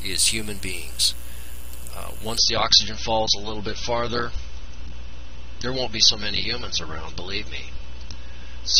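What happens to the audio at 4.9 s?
At 4.9 s the audio is inside an adaptive stream at a lower bitrate, from 2.38 s to the end. The stream abruptly switched down without any gap, so treble vanishes above 6.3 kHz with coarse codec artefacts, fitting roughly 24 kbit/s.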